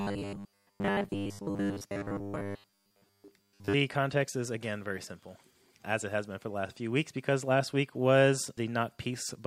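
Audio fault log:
0.01 to 3.74 s, robotic sound from repeated short buffers: a rigid metallic 100 Hz buzz over the speech, likely a 10 ms fragment replayed in place of most incoming audio.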